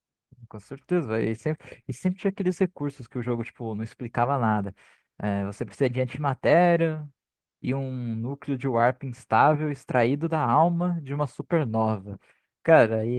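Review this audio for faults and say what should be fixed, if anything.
There's clock drift between sender and receiver running through the whole clip: the sender's clock is about one percent slow, so the receiver's jitter buffer keeps drifting toward empty and has to patch things up, which gives the speech small, uneven timing hiccups. The fix is to lock both ends to a shared reference clock, or use an adaptive resampler that tracks the rate gap smoothly.

At 1.82 to 1.86 s there's a short stall from a late packet. The buffer ran dry, so the receiver stretched the last bit of sound for about 17 ms until the packet showed up, then carried on with nothing lost. A slightly deeper jitter buffer would ride out that kind of late arrival.

From 3.28 to 11.6 s you get repeated timing corrections. The receiver plays at 99 percent speed and keeps slipping in little repeated pieces, adding up to around a tenth of a second in total. 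Handling the drift with continuous resampling would get rid of these edits.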